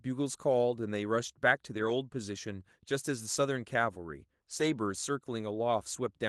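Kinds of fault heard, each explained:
Lost packet rebuilt from error correction: missing packets were replaced by low-bitrate copies from following packets, so audio around 1.7 s and 4.6 s turns rougher and noisier, without gaps.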